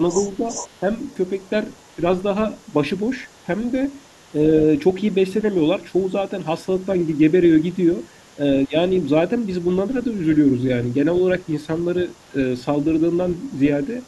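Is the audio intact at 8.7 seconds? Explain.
No. Two faults overlap at 8.7 s. The other side's voice is leaking through from 4.71 to 12.35 s. A second, very faint voice sits far below the talker's level. The talker's device likely played the far end on a loudspeaker, and the echo canceller did not remove all of it from the microphone. That residue rides under the speech as a quiet layer.

Speech is also suppressed in double talk from 8.66 to 8.75 s. The talker's voice drops sharply, by a deep amount, for about a tenth of a second. Both sides were likely talking at once here. The echo canceller could not tell its own talker from the loudspeaker echo, so it turned everything down. The voice dips briefly, then recovers.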